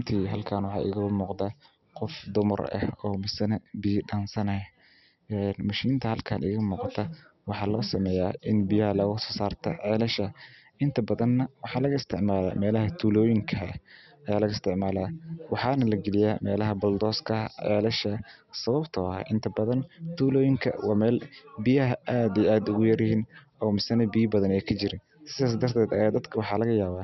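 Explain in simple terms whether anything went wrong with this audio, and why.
Nothing went wrong with this audio, because nothing in it can be heard failing at any point.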